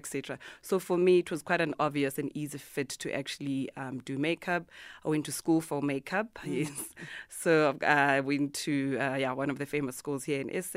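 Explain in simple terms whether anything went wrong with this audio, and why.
Nothing went wrong here; I hear no faults.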